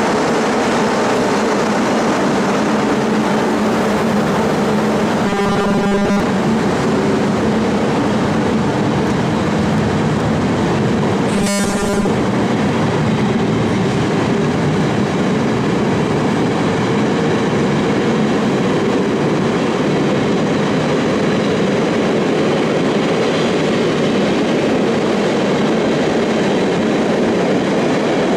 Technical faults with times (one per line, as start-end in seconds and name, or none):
5.27-6.20 robotic sound from repeated short buffers
11.36-12.07 robotic sound from repeated short buffers